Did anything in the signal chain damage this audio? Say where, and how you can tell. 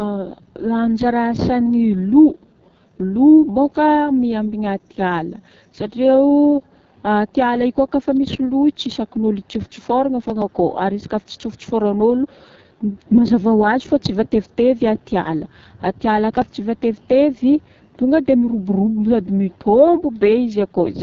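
Yes. At the codec stage, the whole clip carries AMR wideband (HD Voice) codec damage. The speech has nothing above 7.2 kHz and a heavy rough, raspy texture throughout, which fits one of AMR-WB's lowest rates, around 6.6 kbit/s, where the pulse-driven vocal tract model is starved of bits.

At the driver or buffer stage, there is processor overload crackle from 10.22 to 10.42 s, a gritty tearing about 0.2 s long. It sounds like around ten missed deadlines on buffers of a few milliseconds each. Each missed buffer was skipped, leaving hard-edged gaps.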